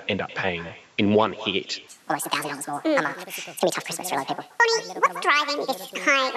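From the start and through the whole clip there is an echo with no canceller. Every syllable returns roughly a fifth of a second later as a copy about 16 dB quieter and thinner, because the far end's loudspeaker feeds its microphone and nothing removes it. Unlike room reverberation, which smears continuously into a tail, this is a single distinct repeat at a fixed delay, so the speech sounds doubled rather than blurred.

From 1.88 s to the end at 6.37 s the speech runs at the wrong speed, 1.67 times too fast, most likely from playback or editing against the wrong clock. Pitch rises about ten semitones along with the tempo, so the speech turns high, chipmunk-like and hurried. A pitch-shift fault would leave timing intact, but here syllables and pauses shrink too. The call microphone's high-pass filter, which trims only the lowest bass, works normally through both sections.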